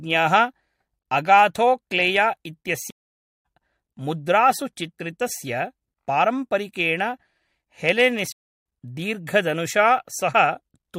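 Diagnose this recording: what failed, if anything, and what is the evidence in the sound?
A stream reconnect failed twice, at the network stage. The sound drops to silence from 2.90 to 3.46 s, a gap of about 0.54 s. It comes back at "मुद्रासु चित्रितस्य पारम्परिकेण". A second dropout runs from 8.32 to 8.65 s, about 0.32 s of silence. Each time the speech resumes a few tenths of a second further on, so material is skipped. The connection broke, the player reconnected and restarted its decoder mid-stream at a later live position.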